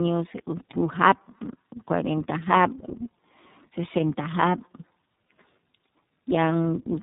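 Throughout the speech, tandem speech coding is audible: the signal passed through AMR-NB, a G.711 mu-law link, then iLBC, being decoded and re-encoded at each border. Two low-rate speech coders compound their errors, leaving a rough, warbly, muffled sound with nothing above 3.8 kHz.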